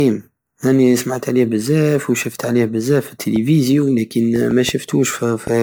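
Throughout the speech there is generation loss: a swirly, hollow smear with blurred attacks, worse than one 128 kbit/s pass explains, which points to likely repeated MP3 re-encoding, roughly seven times. From 3.36 to 5.48 s, after "بزاف وشفت عليه بزاف", a train of clicks follows: about five similar pops at an uneven 1.9 per second, peaking roughly 10 dB above the speech. They are audible in pauses, unlike codec smearing, and likely come from interference or a faulty connection.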